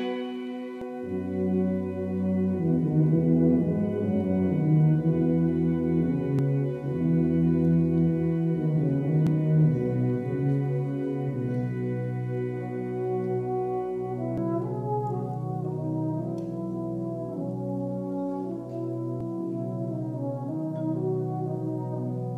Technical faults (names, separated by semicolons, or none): compressed frames skipped